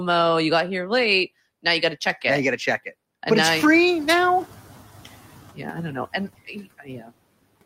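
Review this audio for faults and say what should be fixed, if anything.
Noise suppressor artifacts run through the whole speech clip. The suppressor pulls down the bands it judges to be steady noise by about 16 dB, and because it decides frame by frame, the background dips in the gaps and comes back up under the speech. Prevention: use a gentler maximum reduction and smoother per-band gain changes so the residual stays even.

Noise suppressor catching up occurs from 3.45 to 5.02 s. The room noise, which is a genuine part of the recording, steps up by about 16 dB around 3.5 s and then sits about 20 dB below the speech. The suppressor's noise estimate has not caught up at that point, so the louder background gets only about 9 dB of reduction. It then sinks over roughly 1.57 s as the estimate adapts. Prevention: let the noise estimator track faster when the noise floor jumps.

Speech cut by the noise suppressor happens between 6.45 and 7.11 s. 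The suppressor treats parts of the speech as noise and turns them down along with the background, by up to about 13 dB. Those parts add up to around a third of a second in that span. The affected parts sound swallowed and faint against the surrounding speech. Prevention: protect low-level speech with better voice-activity detection and a floor on how far speech-bearing bands can be cut.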